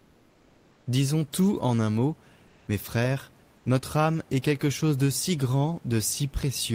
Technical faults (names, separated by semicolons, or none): comfort noise in place of the background